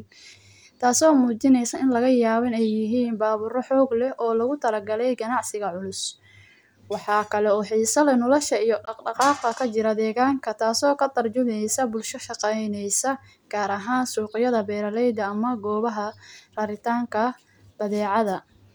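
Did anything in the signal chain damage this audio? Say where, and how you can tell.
Yes. At the wireless playback stage, packets likely failed to reach the headphones in time and were discarded, a Bluetooth dropout. The output falls silent in a short hole from about 8.85 to 8.91 s, with edges that cut off abruptly or fade within a few milliseconds rather than a natural decay. When the speech returns it has moved on, skipping roughly 15 ms of audio, which fits a single lost frame, instead of picking up where it stopped.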